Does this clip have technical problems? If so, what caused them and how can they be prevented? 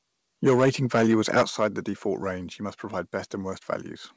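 Yes. Microphone overload runs from 0.46 to 1.66 s. The loudest syllables have a harsh, crackling edge because their peaks have had their tops sliced off flat. The signal arriving at the converter was driving it about 11 dB past full scale, so a few percent of the samples in that stretch sit pinned at the limit. The likely cause is an input gain set far too high. To prevent it, lower the input gain or increase the mouth-to-microphone distance until the loudest peaks stay several decibels below full scale.

The microphone volume is stepped down twice, at 0.49 s and at 1.5 s. Each time, voice and background together drop abruptly in level, first by about 2 dB and then by about 6 dB. Both steps fall inside the overload stretch. This is likely the call software's automatic gain control detecting clipping and cutting the device's input volume in single jumps rather than gradually. To prevent it, set the input level correctly before the call, so the software never needs to intervene.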